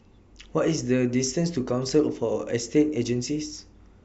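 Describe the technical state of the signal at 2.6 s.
At 2.6 s the speech signal is intact, with no audible fault at that moment.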